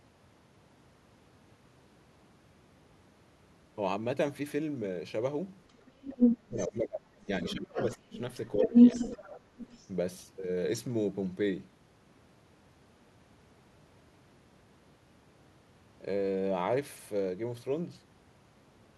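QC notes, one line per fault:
5.69–6.67 s and 7.45–9.91 s, other side's voice leaking through: a second voice sits behind the talker, strong at about 10 dB relative to the speech, then about 5 dB over the longer stretch. The likely cause is loudspeaker playback reaching the microphone that the echo canceller failed to remove.
5.79–5.89 s, 6.31–8.19 s and 8.55–8.75 s, speech suppressed in double talk: the talker's voice dips by about 20 dB, then by up to about 30 dB for roughly 1.5 s, then by about 10 dB, while the other side is heard. The likely cause is the echo canceller attenuating everything during simultaneous talk.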